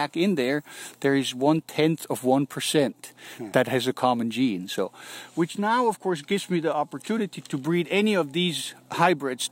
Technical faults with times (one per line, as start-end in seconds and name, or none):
1.59 dropped samples
6.31 dropped samples